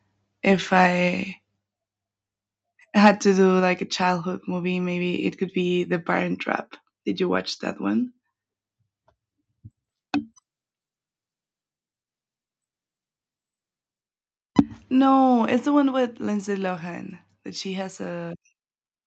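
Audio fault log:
3.05–3.09 s and 14.58–14.60 s, microphone overload: the peaks are flattened, about 5 dB over full scale in the first burst and about 2 dB in the second, where roughly a tenth of the samples sit at the limit. The result is a brief harsh crackle, likely from an input gain set too high for the converter.
14.60 s, microphone volume stepped down: right after the second distorted peak, the level of both the speech and the background drops in a single step of about 3 dB. This sounds like the call software cutting the device's input volume in response to clipping.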